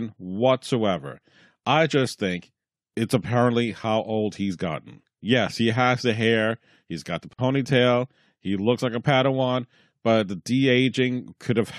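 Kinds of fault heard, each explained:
Gap at a join of encoded pieces: At 7.33 s, just after "hair he's got the", the speech drops into silence for about 53 ms, then resumes where it stopped. Two separately encoded pieces were joined untrimmed, so encoder delay and final-frame padding remain. The gap's edges are smeared by the codec.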